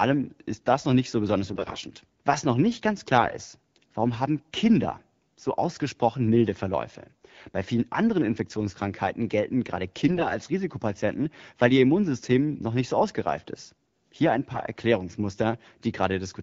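AMR bit errors hit at 1.5–1.77 s after "noch nicht so besonders", 3.14–3.34 s between "noch nicht ganz" and "ist warum haben", 10.06–10.38 s after "gelten gerade", and 14.54–14.62 s. Each time, flipped low-priority bits scramble the excitation pulses and fine gain and spectral values of the AMR-WB frames, so pitch and level hold roughly steady but the voice goes hoarse, scratchy and gargly for those moments.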